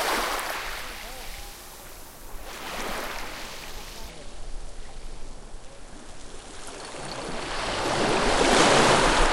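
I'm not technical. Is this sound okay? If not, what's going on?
No. There are two problems.

The first is compressed frames skipped. At 0.54 to 0.56 s, the sound jumps ahead. About one small chunk of the audio never plays, roughly a twentieth of a second. Compressed audio is stored in short blocks, here blocks of about 46 ms. One block was missing or damaged, so the player skipped it.

The second is a section at the wrong speed. From 4.09 s to the end, the sound plays at about 0.71 times its proper speed. Everything becomes slower and deeper, roughly seven semitones lower. Speed and pitch drop together, like a tape running slow. The likely cause is that this part was played or edited using the wrong clock setting.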